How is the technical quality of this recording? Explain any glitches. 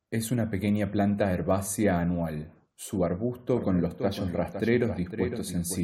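There's one clear problem, a doubled audio track. From 3.57 s to the end, a second copy of the speech trails about half a second behind, roughly 10 dB quieter. It cuts in abruptly with no room colour, likely from a slower capture path picking up the same signal.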